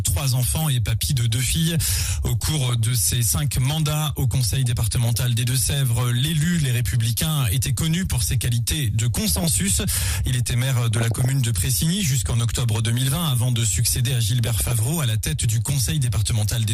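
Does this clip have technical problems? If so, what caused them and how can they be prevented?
Yes. Throughout, the audio sounds dull and gurgling, with upper bands flickering in and out and a granular edge, most likely MP2 compression at a low rate, which fits roughly 80 kbps. A spectrogram shows high-frequency blocks switching on and off. Prevent it by encoding at a higher bitrate.

DAB burbling appears at 2.41–2.74, 9.28–9.48, 10.94–11.33 and 14.44–14.79 s: short noise blips in single sub-bands where bit errors slipped past error correction. Spectrograms show isolated bright band flashes. Prevent it with stronger reception or a better antenna.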